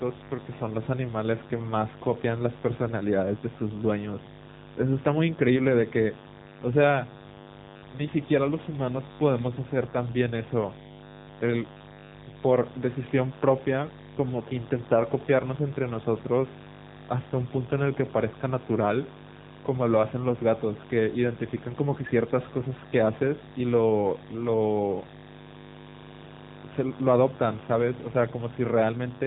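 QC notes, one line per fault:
Throughout, mains buzz: unshielded or switching-polluted wiring injects 50 Hz spikes with harmonics into the speech, giving a steady raspy buzz only about 15 dB below it.
Throughout, AMR narrowband mobile codec: low-bitrate mobile coding, which fits roughly 8 kbps, removes everything above 3.8 kHz and rebuilds speech from pulses, so it sounds muffled, buzzy and synthetic.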